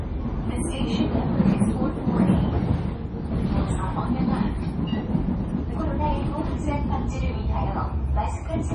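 Throughout, likely heavy MP3 compression at a starved bitrate near 32 kbps removes everything above 11.3 kHz, so the sound turns dull, watery and swirly.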